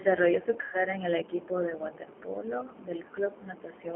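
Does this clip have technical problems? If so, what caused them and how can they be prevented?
Yes. Throughout, the speech carries G.729 codec damage: nothing passes below about 250 Hz or above 3.4 kHz, and the voice sounds plainly rough and synthetic, which fits an 8 kbit/s model-based coder. That buzzy, rebuilt texture separates it from the smeary, swirly artefacts of a transform codec at low bitrate. Using a wideband codec such as G.722 or Opus on the call path would prevent it.

From 0.61 to 0.82 s there is VoIP packet loss concealed by the speech codec. For about 120 ms the decoder repeats its last pitch and vocal tract filter, so the sound stretches into a fading buzzy tone or coloured noise. The voice stays weak for a short time after packets resume because each frame builds on the one before. A hard dropout would leave silence or a click instead. Jitter buffering, network prioritisation of voice traffic, or forward error correction would prevent it.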